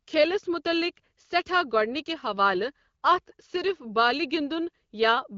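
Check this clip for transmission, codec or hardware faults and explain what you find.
Nothing stood out on listening to this speech, which arrives over an AMR wideband (HD Voice) link at 12.65 kbit/s with no content above about 7.3 kHz.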